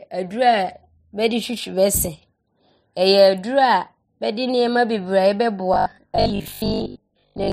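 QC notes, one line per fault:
5.74–7.52 s, robotic sound from repeated short buffers: rigid metallic 50 Hz buzz, likely from a roughly 20 ms buffer replayed while about half the audio is skipped.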